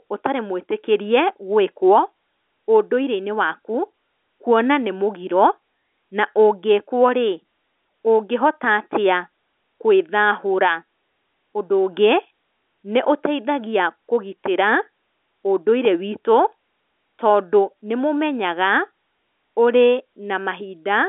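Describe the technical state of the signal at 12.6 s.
At 12.6 s the speech is intact, with no fault present, and it carries the narrow band of an ordinary A-law telephone line, roughly 250 Hz to 3.5 kHz.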